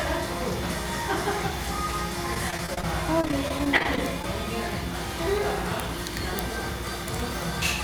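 Repeated packet loss (robotic sound) breaks up the audio from 2.34 to 2.84 s and from 3.21 to 4.24 s. Short holes, up to 27 ms, are patched with repeated sound, giving choppy bursts.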